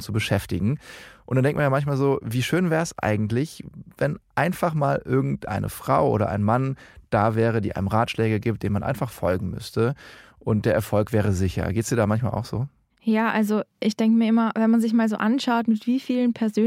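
No technical faults can be heard in this recording.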